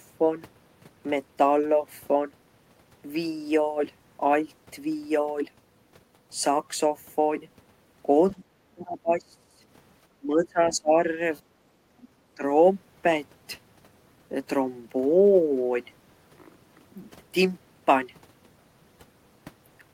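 From 8.32 to 8.41 s the speech briefly sinks by roughly 15 dB. It then drops much harder, by around 30 dB, from 8.73 to 9.63 s, and again by about 25 dB from 10.2 to 10.96 s. In these stretches the talker thins out and nearly vanishes in pieces. This is speech suppressed in double talk. The likely cause is that both ends were talking at once, so the echo canceller could not tell the local talker from loudspeaker echo and pulled the whole microphone signal down.

At 11.71 to 11.92 s the room tone dips by about 9 dB for a fraction of a second and then comes back. This is background gated by the echo canceller. While the far end was playing through the loudspeaker, the canceller clamped the microphone, and the ambience fell away with it until the suppression released.

Between 12.03 and 12.07 s a faint scrap of a second voice slips in, sitting roughly 30 dB below the talker. It is only a brief fragment. 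This is the other side's voice leaking through, likely loudspeaker pickup that the echo canceller failed to subtract fully before the signal was sent on.

Finally, from 12.36 to 12.43 s, the speech ducks again, this time by roughly 10 dB. It is a short, shallow return of the same speech suppressed in double talk as both sides likely overlapped for a moment.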